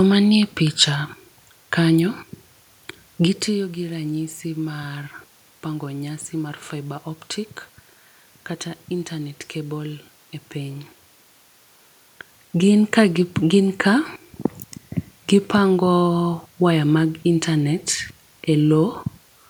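No technical faults are present in the signal: the background noise belongs to the room, and the level shifts around 3 s and again around 12 s are the talker moving relative to the microphone.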